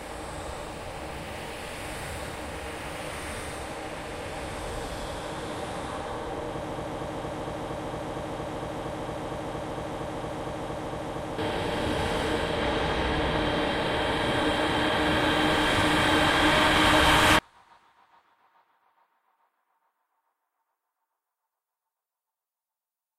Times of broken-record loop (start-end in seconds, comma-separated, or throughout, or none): 6.71-11.38